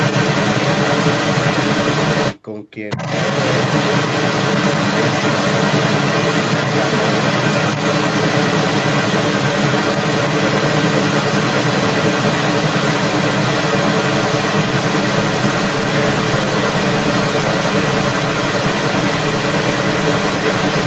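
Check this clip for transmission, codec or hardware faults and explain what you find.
One fault is present: the other side's voice leaking through, from 0 to 2.39 s and again from 2.89 s to the end, with a brief gap between. A second voice sits roughly 10 dB above the speech, likely because the echo canceller left the loudspeaker's playback in the microphone. On a spectrogram it shows as overlapping, unrelated harmonic stripes, all topping out at 8 kHz like the rest of the call audio.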